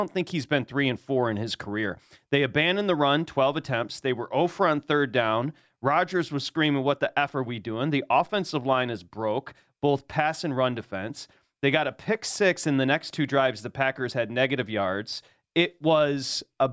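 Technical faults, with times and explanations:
No technical faults can be heard anywhere in the speech signal.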